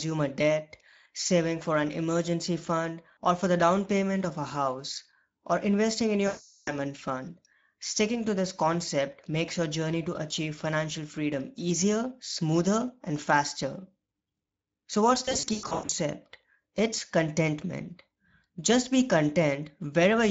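Throughout, the speech sounds hoarse, grainy and noisy, the plainly audible damage of the Speex codec, whose character fits a setting near 16.8 kbps with too few bits for the excitation. From 6.27 to 6.74 s, and again from 15.25 to 15.91 s, the speech smears into a fading buzzy tone or coloured noise. This is VoIP packet loss concealed by the speech codec: the decoder extrapolated from its last pitch and filter while gain dropped. The first gap points to roughly 400 ms lost. The second is broken and intermittent, fitting about 380 ms of losses scattered over 640 ms, the longest lasting 100 ms.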